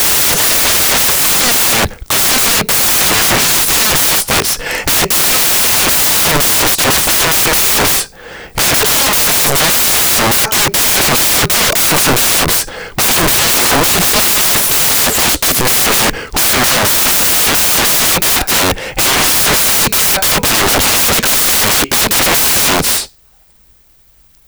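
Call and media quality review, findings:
Loud broadband white noise throughout. Samples built from the wrong bytes: the reader or decoder is misassembling each sample's bytes, so fast-changing low bits dominate the values.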